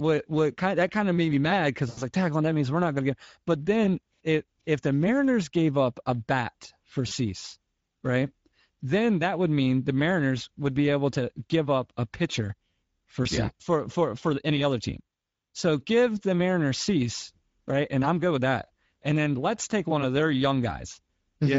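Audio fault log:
throughout: Speex codec. The speech is carried through Speex at a setting that fits about 16.8 kbps. At that rate the CELP excitation gets too few bits to model the voice's fine structure, so the damage is plainly audible: the speech sounds noisy and hoarse. Any content above 4 kHz is a shaped, noise-like fill and not real detail.
1.89–2.02 s: VoIP packet loss concealed by the speech codec. Right after "made me mad because", about 80 ms of packets are missing, and the decoder bridges the gap by extending its last pitch and filter with falling gain. The voice smears into a fading concealment sound. It recovers slowly, sounding weak or distorted as "like tackling that means" begins, because each rebuilt frame depends on the one before.
7.07–7.13 s and 13.23–13.28 s: VoIP packet loss concealed by the speech codec. Two shorter gaps of the same kind follow: about 40 ms just after "up a bat for" and about 20 ms just after "up a pitcher for", ahead of "yeah for for for". 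In each one the decoder stretches its last pitch and filter into a brief smear that dies away.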